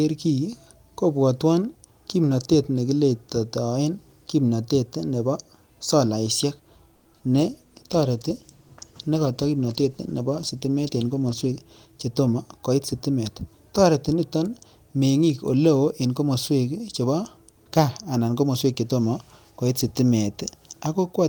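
Packets held up in transit most likely left the jitter buffer empty at 6.95 s, producing a call audio freeze. The receiver kept extending the last sound for about 100 ms, which comes through as a short, fading buzzy tail, until 7.07 s. When the held packets arrived, playback resumed where it had paused. Nothing of the speech is lost, but the stream now runs about 100 ms later than before.

Immediately after "kiletoen kimnatet nebo solaishek", two bursts of short concealed packet loss follow at 7.13 to 7.16 s and 7.18 to 7.21 s. In each, about 20 ms of audio failed to reach the decoder in time. The receiver bridged the hole by continuing the preceding sound before blending back into real audio, so each burst is heard as a brief smear or wobble rather than a clean gap.

At 7.33 s the call's bandwidth estimate fell and the encoder was told to drop from 32 kbps to 15 kbps, a call bitrate drop that holds at the low rate for roughly 4.3 s until 11.65 s. 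With less than half the bits to spend, the coding turns coarse and the top end is trimmed. The speech sounds rougher, watery and duller through that stretch.

Overlapping the end of that, from 11.45 to 12.35 s, the jitter buffer had built up more audio than its target. It therefore applied a jitter buffer speed-up, repeatedly cutting out pitch-period-sized slices and removing about a tenth of a second in total. The speech runs at about 110% speed with unchanged pitch and sounds hurried leading into "koit sitimet".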